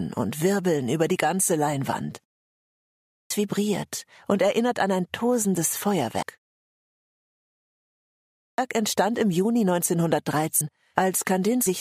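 At 3.04 s the speech comes back after a pause of just under 0.9 s, and the first 0.26 s of it is simply gone. That's a clipped start after a pause: the output device dozed off during the silence and needed a moment to wake and lock on again, so the phrase starts abruptly with its opening sounds missing. The same thing happens at 8.33 s, after a longer gap of about 2 s, where roughly a quarter of a second is swallowed before the audio catches up.

Between those, at 6.22 s, the speech jumps forward by about a fifth of a second. That's compressed frames skipped: a run of several frames never got played, either because they were missing or because the decoder rejected them as damaged. The size of the jump fits 32 ms frames. It happens again at 10.61 s and at 11.66 s, each time with a similar forward jump.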